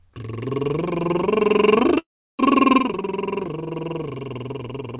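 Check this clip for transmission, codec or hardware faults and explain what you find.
Two faults disturb this music clip, which has also passed through a call path whose audio stops at 4 kHz, consistent with a narrowband codec such as G.711.

Call audio freeze, 1.98 to 2.41 s: packets were likely held up and the jitter buffer ran dry, so the last sound trails off into about 0.34 s of silence. The music then resumes where it stopped, 0.41 s late, with nothing lost.

One channel drops out, 2.80 s to the end: a stereo channel is likely lost, so after mono summing the shared content falls abruptly by about 6 dB and anything present only in that channel vanishes.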